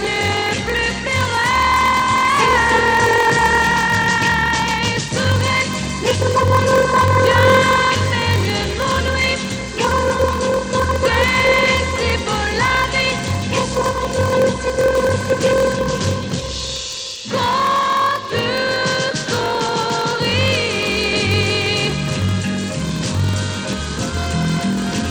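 A steady buzz at about 43.1 Hz runs through the whole recording. It comes from a block size mismatch (padded). Each block is shorter than the next stage reads, fitting a 1024-sample read, so zeros fill the gap. Playback runs at 0.938 times normal speed, at near-normal pitch.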